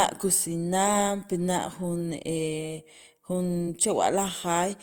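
At 3.65 to 3.68 s the speech briefly smears into a short wobble, as if the last sound were held and stretched for an instant before the talk blends back into place. This is short concealed packet loss: about 20 ms of audio arrived too late for the decoder, so the receiver covered roughly 18 ms of it by extending the preceding sound, then blended back into the real signal. That synthetic fill is what comes across as a smear.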